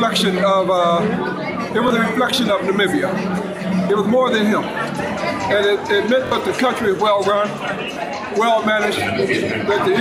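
The audio has three repeated-buffer stutters, at 1.88 s, 6.27 s and 7.94 s. Each time, fresh audio arrived late, so a piece about 23 ms long, which fits a 1024-sample buffer, replays with hard joins. At 6.27 s it repeats twice, and roughly 20 to 50 ms of audio is lost per event.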